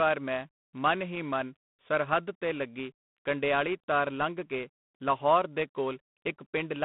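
The speech passed through G.726 ADPCM coding throughout, at a coarseness that fits 24 kbit/s, leaving a harsh, rasping hiss tracking its level and nothing above 3.8 kHz.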